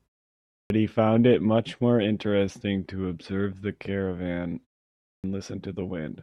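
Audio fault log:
0.61 s and 5.15 s, clipped start after a pause: after roughly 0.6 s of silence, the output wakes late and swallows about 90 ms, so speech bursts in with its opening chopped off.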